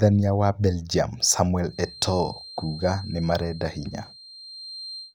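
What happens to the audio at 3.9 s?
At 3.9 s a feedback whistle is running under the speech. It starts at 1.62 s and lasts to the end of the clip. It is a thin, steady 4.2 kHz tone, roughly 20 dB below the voice, swelling and fading slowly in level. A loudspeaker-to-microphone loop held just at the edge of feedback is the likely cause.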